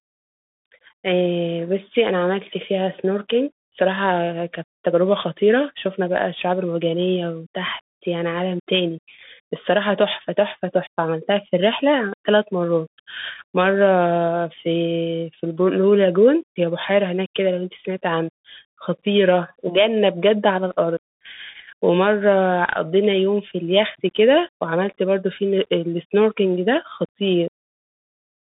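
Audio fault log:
Throughout: Bluetooth CVSD headset codec. The speech sits in a narrow band of 150 Hz to 3.6 kHz, with nothing above 3.8 kHz. Each sample is a one-bit step up or down. Loud high sounds outrun the adapting step and distort. S sounds turn scratchy over grainy hiss.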